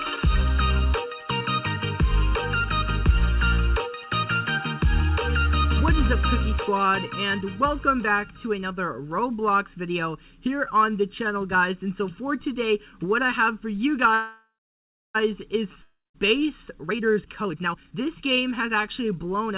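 From start to end, the audio has channel delay with comb filtering. One channel runs just under a millisecond late, and the two are summed. Shared content cancels at regular intervals, with the first notch near 700 Hz. The sound is hollow and phasey throughout. It is also band-limited to the telephone range, with nothing above 4 kHz.

At 14.14 s a call audio freeze sets in and lasts until 15.17 s. The last sound is stretched into a buzz that fades out. About 0.66 s of that stretch is silent. Playback then resumes exactly where it stopped. Nothing is lost, but the audio now runs about 1 s late. Packets held up in transit likely emptied the jitter buffer.

From 15.83 to 16.16 s comes a long network dropout. A fading buzz fills the gap, ending in about 0.18 s of silence. The audio returns further on. About 0.32 s of sound never plays. The likely cause is lost packets.

From 16.74 to 19.52 s there is a jitter buffer speed-up. 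Short pitch-period slices are cut again and again, roughly a second in total. Playback runs at 135 percent with unchanged pitch. The passage sounds hurried and rushed.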